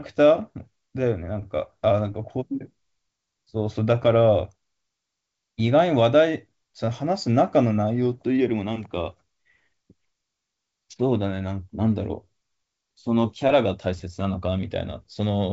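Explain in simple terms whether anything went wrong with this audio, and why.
Nothing went wrong here: the speech simply came through a wideband phone line using G.722 coding, which is why the sound tops out at around 7.7 kHz, and that's just how such a call is meant to sound.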